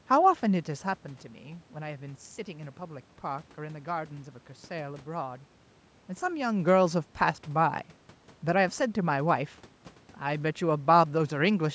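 No technical faults are present: the signal carries the usual band limit of call microphone processing, with nothing above 8 kHz, along with the room's own background noise, and neither is a system error.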